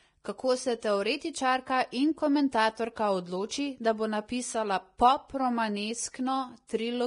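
A speech clip with heavy Vorbis compression damage throughout: nothing above 10.6 kHz, and the remaining treble is hissy and grainy, with roughened tones and smeared consonant attacks. The likely cause is coarse treble quantisation at a low bitrate, consistent with roughly 30 kbps.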